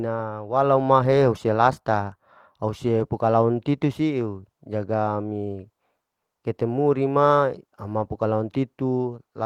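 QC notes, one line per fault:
Nothing to flag here, just speech carried through Opus in its hybrid mode at 24 kbps, which keeps the full audio band and leaves only a light touch of coding on the sound.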